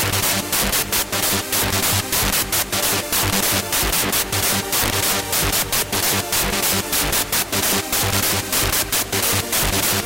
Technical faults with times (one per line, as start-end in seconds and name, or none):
0.00-10.05 integer overflow